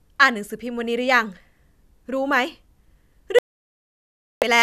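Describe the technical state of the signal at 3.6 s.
At 3.6 s the speech is silent. This is a digital broadcast dropout running from 3.39 s to 4.43 s, about 1.03 s in all. The receiver stopped getting usable frames, either because the signal was lost or because frames failed their checksum. It muted its output until good frames arrived again. The sound cuts away to silence and returns at 4.43 s. Whatever was sent during that gap is gone.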